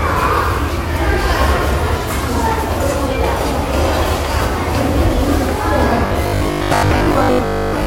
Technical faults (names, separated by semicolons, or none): robotic sound from repeated short buffers